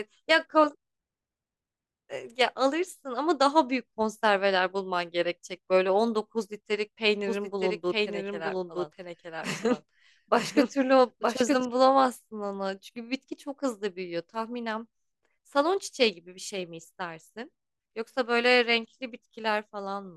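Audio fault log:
7.27–11.65 s doubled audio track: a dry, full-band copy of the speech trails about one second behind at roughly 5 dB lower, likely from a second, slower capture path. On a spectrogram the same harmonic patterns repeat one second later, with abrupt onset and cutoff.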